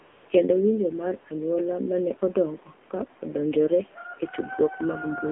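From 0 to 0.30 s, the phone treated the opening as silence and sent no speech frames for about 295 ms. The receiver filled that gap with AMR comfort noise, a synthetic hiss rebuilt from a rough description of the background's level and spectrum. It sounds smooth and steady, unlike a real room. When the first speech frames arrive, that artificial bed switches off abruptly, and the real background, about 20 dB below the speech, takes over.

For the whole clip the speech passes through the AMR narrowband mobile codec. The 8 kHz sampling discards everything above 4 kHz, and the phone line narrows the band further, to about 250 Hz to 3.4 kHz. The result is thin and boxy, with no low body and no air. The codec models the vocal tract and drives it with a few pulses per short sub-frame, at a rate that fits roughly 7.4 kbps. That sparse excitation makes the voice plainly buzzy and synthetic, and the background takes on a swirling, warbling texture.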